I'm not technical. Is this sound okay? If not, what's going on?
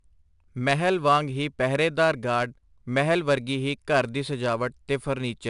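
No. 4-bit ADPCM compression runs through the whole clip. This old-style compression saves each moment of the sound as a tiny step from a guess about where the sound is heading, with only 16 possible steps. The rounding leaves a gritty hiss that rises with every loud part of the speech and roughens sudden sounds. Nothing is left above 10.6 kHz, which fits a lowered sample rate and makes the speech sound dull.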